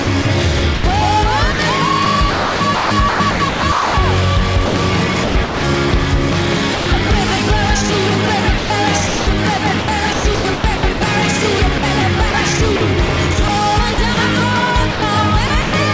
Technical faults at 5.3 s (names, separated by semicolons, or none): sound chopped by the voice detector